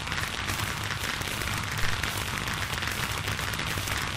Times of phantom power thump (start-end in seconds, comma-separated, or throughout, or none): 1.83-1.95